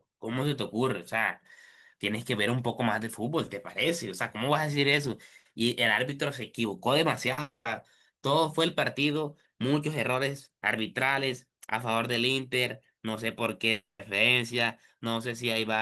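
At 7.33 to 7.39 s there is short concealed packet loss: about 40 ms of speech never reached the decoder in time, and the receiver bridged the hole by extending the preceding sound before blending back in. It comes across as a brief smear.

Immediately after, from 7.41 to 7.67 s, the audio breaks off for 240 ms. A fading continuation of the last sound is followed by 140 ms of near silence, then speech resumes with that stretch missing. This is likely a long network dropout. The same pattern recurs at 13.71 to 14.01 s, losing 280 ms, with 170 ms of it silent.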